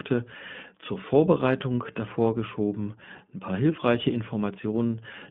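A speech recording carrying iLBC codec damage from start to finish. The band is cut to a telephone line, roughly 150 Hz to 3.5 kHz. Nothing above 4 kHz survives. The sound is plainly rough and slightly synthetic. Each 20 ms frame's excitation is coded on its own, without help from the previous frame. The texture fits a 15.2 kbps iLBC stream. The result is a narrow, grainy, VoIP-like tone.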